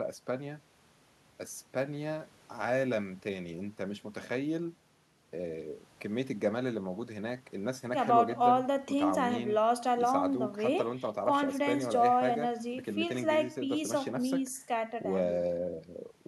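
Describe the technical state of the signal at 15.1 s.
At 15.1 s the speech signal is intact, with no dropout, distortion, glitch or other fault audible at that moment.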